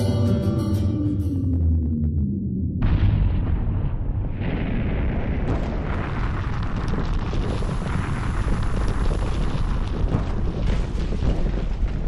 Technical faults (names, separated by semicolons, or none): none